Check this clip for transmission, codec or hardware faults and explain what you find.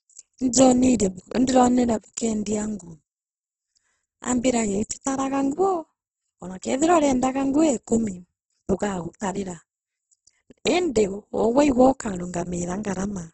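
One fault affects the whole clip.

Opus compression, throughout: the likely cause is heavy Opus coding in its music (CELT) mode, at a rate that fits about 12 kbps. Starved bands are filled with folded or noise content rather than left empty, so the speech sounds rough and grainy, with nothing above 8.2 kHz.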